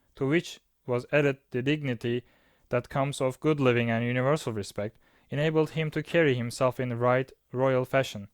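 Nothing technical goes wrong anywhere in this bit of speech, so there's no fault here to point to.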